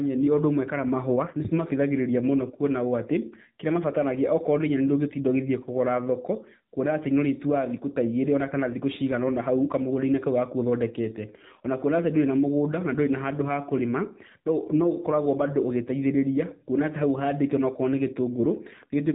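Throughout, the speech carries AMR narrowband mobile codec damage. Nothing above 4 kHz survives, so it sounds thin. Each 5 ms is rebuilt from a vocal-tract model and a few pulses. The plainly buzzy, synthetic edge fits a low mode near 7.4 kbps.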